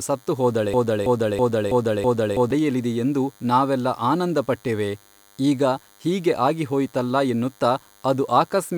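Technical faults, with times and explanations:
Throughout: DECT cordless phone buzz. A thin, steady buzz sits under the speech for the whole clip, roughly 35 dB below it. Its 100 Hz fundamental carries a dense stack of harmonics. This comes from radio bursts sent every 10 ms by a nearby DECT handset or base station. The audio circuitry rectifies those bursts, so each one becomes an audible click. Repeated at that rate, the clicks fuse into a buzz with a hard, bright edge.
0.74 to 2.51 s: broken-record loop. A fragment about 0.33 s long plays five times in a row, each repeat identical and butted directly against the last. This produces a mechanical stutter lasting nearly two seconds. The likely cause is a stall in the player, encoder or stream, which kept re-sending the last block of audio it held. The speech that belonged in that stretch never arrives, so the sentence jumps forward once the loop releases.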